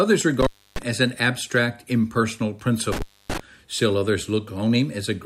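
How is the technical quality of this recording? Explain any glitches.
The recording has two dropouts from an intermittent contact. The first runs 0.41 to 0.82 s, just before "as an abstract impersonal". The second runs 2.92 to 3.40 s, right after it. A loose connection briefly opens the line. Each time, speech vanishes for roughly 0.3 s, with crackle at both edges.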